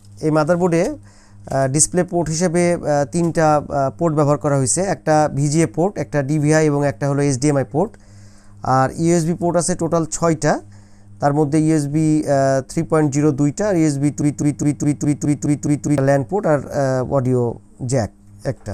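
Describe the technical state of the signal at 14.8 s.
At 14.8 s the signal is caught in a broken-record loop running from 14.22 to 15.98 s: a 207 ms fragment replays identically eight times back to back, most likely because the stream stalled and resent its last buffer. Unlike an echo, the repeats never decay, and the audio that should have played there is gone.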